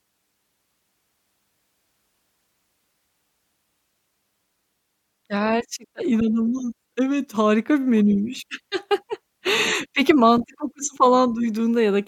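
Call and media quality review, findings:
Two sharp clicks in the speech at 5.37 s and 10.36 s, likely dropped samples: a fraction of a millisecond missing, so the waveform jumps.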